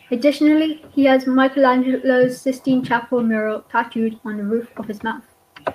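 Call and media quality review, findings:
No faults detected in this speech recording.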